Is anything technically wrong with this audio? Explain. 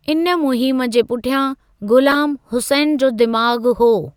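Yes. The speech has corrupt frames decoded. From 2.10 to 2.17 s, just before "हुसैन जो", a harsh squealing burst peaks near full scale across several damaged frames. At 3.39 s, just after "हुसैन जो", a single, much quieter blip peaks around -15 dBFS. In both cases flipped bits made the decoder put energy at the wrong frequencies.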